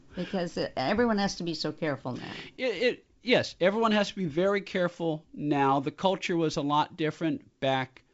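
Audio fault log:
Nothing stood out on listening to this speech, which comes through G.722 wideband telephone coding with content reaching to about 7.7 kHz.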